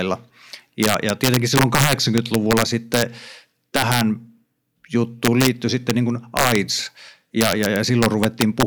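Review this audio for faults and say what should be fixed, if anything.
Integer overflow cracks through the loud stretches of this speech at 0.83–3.02 s, 3.76–4.01 s, 5.25–5.48 s, 5.90 s just before "niin kuin", 6.37–6.55 s just after "niin kuin", and 7.41–8.63 s. Peaks pushed about 2 dB past full scale (barely over at 5.90 s) wrap to the opposite sign. On the waveform, crests snap from top rail to bottom. On a spectrogram, they show as bright full-height vertical streaks. Use saturating arithmetic or a limiter before integer conversion so that overs clamp instead of wrapping.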